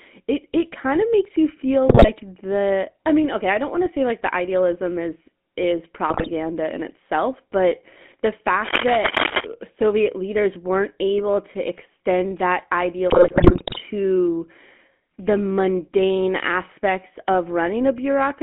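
GSM full-rate codec coding runs through the whole recording. The speech is band-limited to roughly 200 Hz to 3.4 kHz, and the roughness fits the 13 kbps full-rate coder. It models the vocal tract as a filter and drives it with a sparse, regularly spaced pulse excitation that keeps only one sample in three. This gives every voiced stretch a plainly audible buzzy, gravelly texture, and the upper spectrum is missing.

GSM bit errors break up the speech at 1.88 to 2.11 s, 6.10 to 6.29 s and 13.10 to 13.81 s. Corrupted bits in the filter, pitch and gain parameters make the decoder rebuild frames with a bent spectrum or a sudden jump in level. The bursts break the voice into squawks, pops and gargling. The third, at about 0.7 s, lasts the longest. The density of damage suggests an error rate near 5 percent on a weak link.

Cable scratch noise appears from 8.63 to 9.45 s as dense, irregular bursts of scratching and rustling at about the same loudness as the speech. 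The likely cause is a worn cable, connector or control being moved, so that its contact resistance flickers rapidly and injects uneven noise into the signal for that moment.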